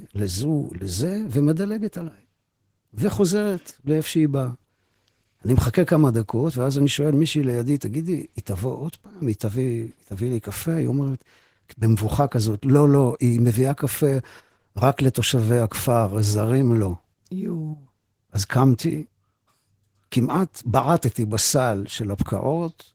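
From start to finish the speech carries Opus voice compression at a bitrate that sounds like about 16 kbps. It's in hybrid mode, with SILK coding the lower band and CELT handling the top, so the audio stays fullband but the coarse excitation comes through as a hoarse, slightly robotic edge.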